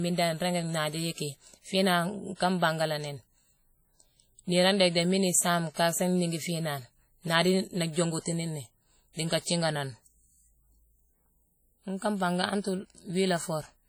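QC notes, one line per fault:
Throughout: WMA compression. The encoder is likely a WMA transform codec running at a very low bitrate, consistent with about 32 kbps. It discards weak spectral lines and lets quantisation noise spread across long blocks, even though the band still reaches about 20.1 kHz. The damage is heavy. The speech takes on a ringing, washy quality, and a hiss rises and falls with the level of the voice instead of sitting as a steady floor.
5.74–5.77 s and 7.93–7.96 s: pre-echo. In each case a sharp onset lands late in a transform block. The codec spreads that block's noise evenly, so noise sized for the loud attack also fills the quiet stretch before it, about 26 ms in the first case and 35 ms in the second. The second comes just before "jongutini ni dii nka". Each attack is preceded by a brief hiss and arrives softened and smeared.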